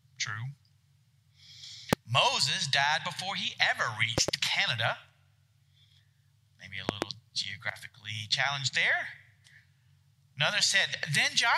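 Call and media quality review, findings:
Loud pop, 1.93–1.95 s (single, about 25 dB over the signal), 4.18–4.31 s and 6.89–7.05 s (double, about 20 dB). Sharp thumps over continuous audio; likely a voltage transient from a plug, switch, static or driver glitch, shaped by downstream circuitry.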